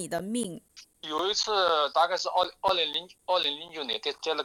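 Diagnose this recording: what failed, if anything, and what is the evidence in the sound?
The failure sits at the driver or buffer stage: periodic USB or driver dropouts. From 0.19 s to 4.19 s, a tick recurs every 0.25 s, about fifteen in all, each a gap of roughly 10 ms filled with silence where a blocked bus or driver stalled delivery.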